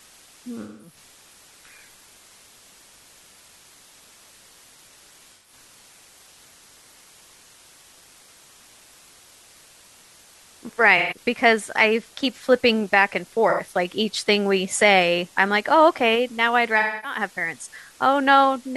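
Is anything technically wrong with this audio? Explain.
Yes, there are two faults.

Low bit depth with dither runs through the whole clip. The speech uses only 8 bits, and dither added before rounding turns the quantisation error into a steady, even white hiss roughly 30 dB below the speech, with no distortion.

AAC frame loss with concealment occurs at 0.61–0.96 s, 5.35–5.53 s, 10.97–11.16 s, 13.49–13.61 s and 16.78–17.19 s. The decoder patches each dropout by reusing the last good spectrum, so the speech turns briefly smeared, noisy or phasey. The longest patches last about 0.21 s and 0.26 s.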